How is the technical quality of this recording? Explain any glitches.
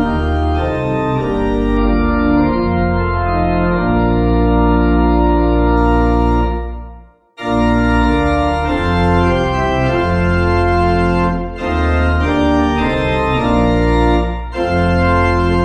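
The recording has one clear glitch, an adaptive stream dropping to a lower bitrate. From 1.77 s to 5.77 s the quality falls suddenly. Nothing is heard above about 4.8 kHz, so the treble vanishes and the sound turns dull and swirly. The player likely switched to a cheaper copy of the stream when the connection slowed. The bandwidth points to a fall from roughly 128 kbit/s MP3 to about 16 kbit/s. There is no gap at either switch. Full quality returns abruptly at 5.77 s.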